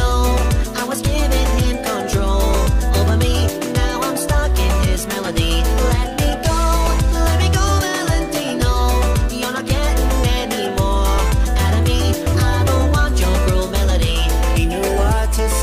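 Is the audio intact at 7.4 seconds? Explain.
Yes, the audio is intact at 7.4 seconds, with no fault present at that moment.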